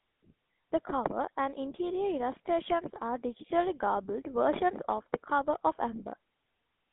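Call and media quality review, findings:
GSM full-rate codec throughout: pulse-driven vocal-tract model and a 200 Hz to 3.6 kHz line band, giving plainly audible buzzy, gravelly roughness, consistent with a 13 kbps full-rate coder.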